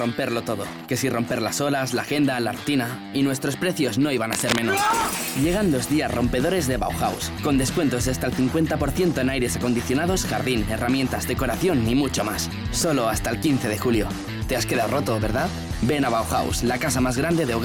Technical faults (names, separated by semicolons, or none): cable scratch noise